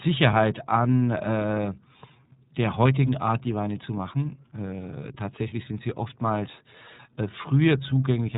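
From start to finish, the speech carries the iLBC codec. Nothing above 3.8 kHz survives, so it sounds narrowband and muffled. Each frame is coded on its own, giving a plainly audible rough, synthetic edge. The texture fits 30 ms frames at 13.33 kbps.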